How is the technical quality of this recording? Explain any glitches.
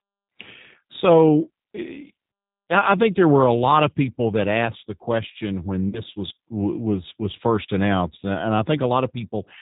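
The technical quality is limited by low-bitrate telephone coding, with one brief dropout.

Throughout, the speech has the slightly rough, synthetic character of the G.729 codec, whose damage is plainly audible, and the sound is consistent with an 8 kbit/s stream. The decoder rebuilds the signal from a vocal-tract filter, a pitch predictor and a few pulses per frame. On a spectrogram, nothing appears above 4 kHz.

From 5.89 to 6.01 s, just after "asked the question when" and before "was was was first", there is VoIP packet loss concealed by the speech codec. About 40 ms is missing, which fits roughly two lost packets. The decoder extends its last pitch and filter, stretching the sound into a buzzy tone or coloured noise that fades. On the waveform this shows as a repetitive, decaying envelope. Because each frame builds on the previous one, the speech recovers weakly after the gap.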